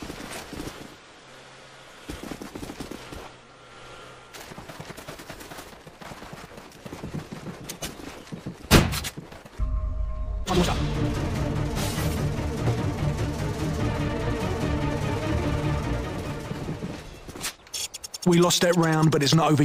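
No technical faults can be heard anywhere in this audio.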